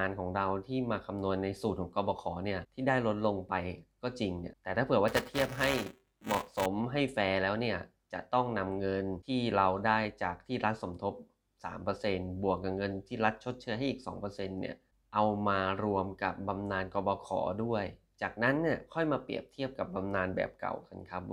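From 5.08 to 6.66 s there is buffer tearing. Writer and reader cross mid-buffer, splicing in older audio. A 345 Hz robotic buzz results, fitting a 128-sample buffer.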